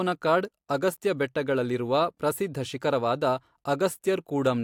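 No technical faults can be heard.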